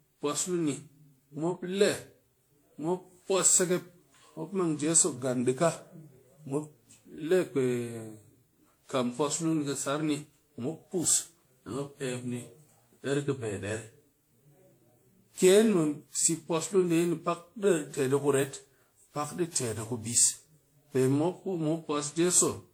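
Across the whole speech clip there is generation loss, likely from around ten rounds of WMA encoding near 96 kbit/s. The voice sounds swirly, hollow and smeared, with blurred consonant onsets. A spectrogram shows scattered holes and mottled noise below a cut-off near 20.1 kHz.

From 0.16 s to 22.71 s, clock slip clicks recur roughly every 0.05 s, about 400 in all, each a single dropped or repeated sample. This fits two unsynchronised clocks drifting roughly 400 ppm apart. They form a faint, steady rattle during voiced sound and vanish in pauses. The waveform shows tiny regular discontinuities, and the spectrogram shows faint evenly spaced vertical lines.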